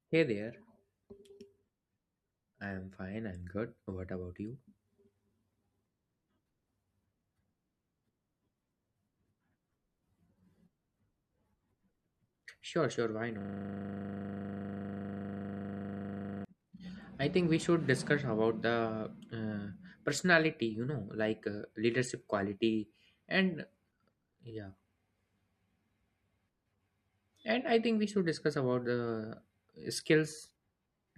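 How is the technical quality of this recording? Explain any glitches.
The recording has one serious glitch, a system hang loop, from 13.41 to 16.45 s. The system froze while the audio hardware kept replaying the same 40 ms stretch of its ring buffer, which fits a 40 ms buffer. Repeating dozens of times at 25 Hz, it sounds like a rough, steady buzz. A waveform shows one identical short segment tiled end to end; a spectrogram shows frozen vertical striping with harmonics spaced 25 Hz apart.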